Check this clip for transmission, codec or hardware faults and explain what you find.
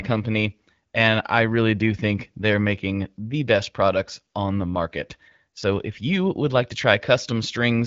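No transmission, codec or hardware faults turn up anywhere in the speech. It has the sound of AMR wideband (HD Voice) coding, consistent with its 12.65 kbit/s mode, with light coding texture and nothing audible above about 7.6 kHz.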